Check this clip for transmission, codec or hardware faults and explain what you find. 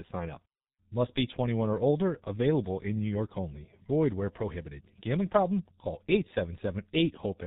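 There's one fault, and it runs the whole length of the clip: G.723.1 codec damage, and it's heavy. The speech is band-limited to nothing above 4 kHz, so it sounds muffled, with a hoarse, rough edge. Consonants smear together. The coarseness points to a bitrate around 6 kbit/s. The codec squeezes speech into 30 ms frames and refreshes its model of the vocal tract slowly, so quick articulations get averaged away.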